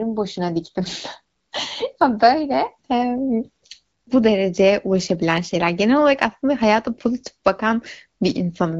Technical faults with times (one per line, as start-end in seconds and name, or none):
none